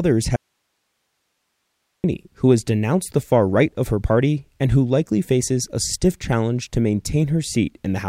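At 0.36 s the speech cuts out abruptly and stays gone until 2.04 s, leaving roughly 1.7 s of nothing but low hiss, somewhere around 55 dB below the speech level. The break is sudden at both ends, with no fade, so it reads as an audio dropout to a faint residue rather than a pause. The likely cause is a momentary loss of the wanted signal upstream while the path after the break stayed live, passing only its own noise.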